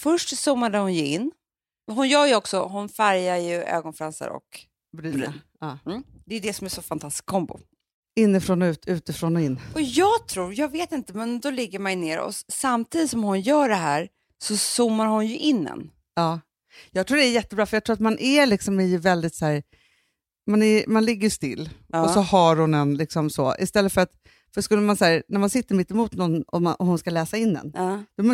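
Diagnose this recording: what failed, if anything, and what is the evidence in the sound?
At the buffer stage, speed and pitch drop together by 5.8%, about a semitone, from 21.31 to 22.97 s, then rise 5.8% from 26.33 to 28.19 s. This is likely a drift correction step, where a clock-matching resampler abruptly changes its rate to rebalance its buffer.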